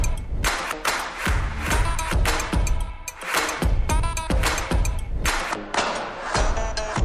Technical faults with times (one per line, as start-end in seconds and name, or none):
5.51-7.04 wrong sample rate